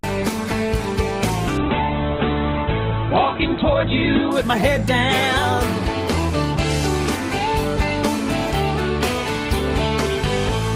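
A call bitrate drop from 1.58 to 4.39 s makes the audio rough and muffled, with the spectrogram cut off above 4 kHz as the encoder starves.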